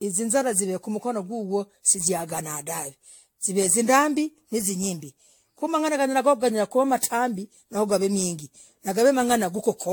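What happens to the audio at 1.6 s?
At 1.6 s the speech carries generation loss, which runs through the whole clip rather than starting there. The sound is swirly, hollow and smeared, with blurred consonant attacks, more degraded than a single AAC-LC pass near 96 kbit/s would leave. The likely cause is repeated decoding and re-encoding, around seven passes, each quantising on a shifted frame grid so that noise and spectral gaps pile up. A spectrogram shows patchy, flickering holes in the upper bands and an empty band above 18.7 kHz, and the waveform shows softened transients.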